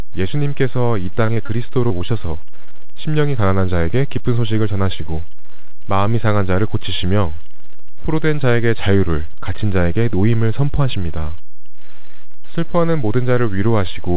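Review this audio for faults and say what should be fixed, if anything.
Short concealed packet loss occurs six times in quick succession: at 1.26 to 1.30 s, 1.34 to 1.38 s, 1.46 to 1.50 s, 1.88 to 1.92 s, 1.98 to 2.02 s and 2.06 to 2.10 s. Each gap is about 20 ms, which fits a single lost packet. The receiver patched each hole by extending the preceding sound, then crossfaded back. The result is a brief smear or wobble in the speech. Short consonants there may be lost. Prevent it with a larger jitter buffer or forward error correction on the link.

A DC offset runs through the whole clip. The waveform sits off zero by a constant amount. You cannot hear it directly. It wastes headroom and shows up as steady energy at the very bottom of the spectrum. Nothing above 4 kHz is present, which points to the G.711 mu-law path at 64 kbps. Prevent the offset with a high-pass or DC-blocking filter at capture.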